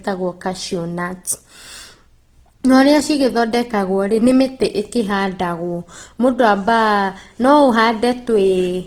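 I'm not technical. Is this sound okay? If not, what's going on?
No. Opus compression runs through the whole recording, from start to finish, and the damage is easy to hear. The speech sounds rough and grainy, with a noisy, sandy texture clinging to it. This is likely the work of Opus, a codec that shrinks audio by keeping the overall loudness of each pitch range but not its fine detail. When it runs short of room, it fills the gaps with borrowed or noise-like sound, and that is the graininess.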